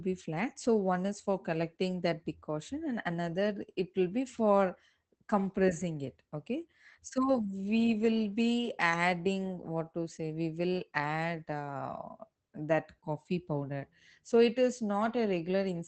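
Speech, with Opus voice compression audible throughout: the top of the band stops near 8 kHz, and the coarsely coded excitation leaves the voice muffled, hoarse and faintly robotic. Sparse linear-prediction coding like this fits a SILK-mode wideband stream around 12 kbps.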